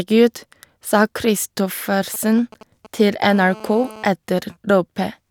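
A speech recording with two bursts of 2G handset interference. From 2.14 to 3.10 s, GSM signalling bursts break in as a galloping dit-dit-dit of brief buzzes, roughly 20 dB under the speech: a nearby phone exchanging control traffic, its radio pulses rectified by the audio circuitry. A spectrogram shows clustered vertical stripes with a comb starting near 217 Hz. From 3.23 to 4.03 s comes GSM phone buzz, a continuous hard rasp at 216.7 Hz about 20 dB below the speech, as a handset in an active call transmits steadily. The spectrogram shows an unbroken stack of harmonic lines every 217 Hz, and the waveform a regular train of sharp-edged pulses unrelated to the speech.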